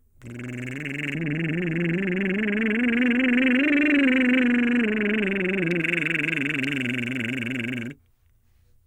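From 1.15 s to 5.81 s the music goes dull, a clear case of de-emphasis applied wrongly. A treble cut meant to reverse pre-emphasis landed on material that had none or was applied twice, so the top end rolls off smoothly, about 11 dB down at 10 kHz against 1 kHz, and everything sounds muffled.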